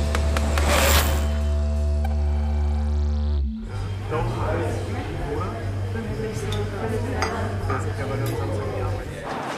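Nothing in this audio points to a technical fault. No break, distortion or other defect stands out at any point.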